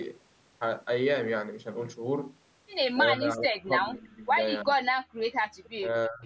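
Speech suppressed in double talk first appears from 3.15 to 4.33 s. The talker's level sinks by roughly 25 dB, in pieces, for about a second in total. The likely cause is an echo canceller hearing both ends at once, failing to tell local speech from loudspeaker echo, and pulling everything down. A shorter dip of around 20 dB follows from 4.64 to 4.81 s.

Background gated by the echo canceller comes at 5.09 to 5.17 s. The room sound drops by about 37 dB for roughly 70 ms while the far end plays through the loudspeaker, then returns once the canceller releases its hold on the microphone.

Double-talk suppression returns from 5.75 to 6.25 s, a drop of roughly 25 dB lasting about 400 ms that runs to the end. Throughout, the call microphone processing trims the lowest bass, and the audio carries nothing above 8 kHz.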